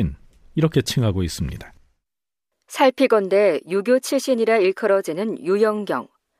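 Nothing goes wrong anywhere in this speech recording, so there's no fault to point to at any moment.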